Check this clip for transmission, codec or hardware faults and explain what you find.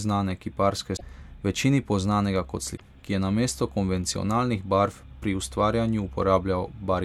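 Two spots of damaged data in the compressed stream: at 0.96 to 1.01 s, right after "znane kiparske", and 2.73 to 2.81 s, between "poznanega kot" and "ki je namesto". Corrupted bytes make the decoder misread frames and lose sync, so you hear a brief glitch in the speech.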